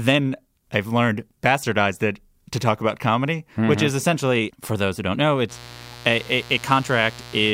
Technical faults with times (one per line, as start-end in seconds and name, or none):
5.47-7.53 mains buzz